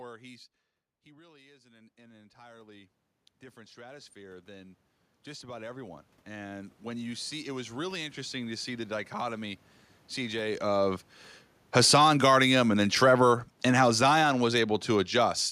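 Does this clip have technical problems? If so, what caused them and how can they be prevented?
Yes. Automatic gain rising occurs from 1.06 to 3.0 s, lifting gain by about 10 dB, and again from 3.54 to 9.62 s, by about 17 dB. Each time the input dropped about 15 dB and the control raised gain gradually, so the room noise swells along with the voice. That shared swell is what sets it apart from the talker moving around 0.5 s, where only the voice changes. Prevention: keep a steady microphone distance and limit the maximum gain the control can add.

Automatic gain falling runs from 11.62 to 15.45 s, pulling gain down by about 7 dB. Voice and background sink together, unlike the voice-only level change when the talker moved near 10.5 s. Prevention: set the input level correctly beforehand so the control has no overload to correct.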